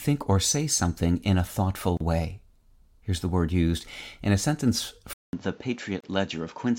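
At 1.97 s the speech drops out until 2.00 s. This is a gap at a join of encoded pieces, about 34 ms of silence. Separately encoded segments were joined untrimmed, so encoder delay and end padding remain.

At 5.13 s the input switches to a poorer device, likely a different microphone or a headset. A 200 ms silence marks the change. The sound then turns dull, with nothing above 7.6 kHz. It is roughly 5 dB quieter, and new background noise sits about 30 dB below it.

From 6.00 to 6.04 s a second join gap cuts in, 32 ms long. It falls 4 s after the first.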